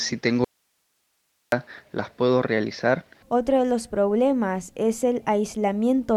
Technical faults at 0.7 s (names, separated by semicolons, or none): audio dropout to a faint residue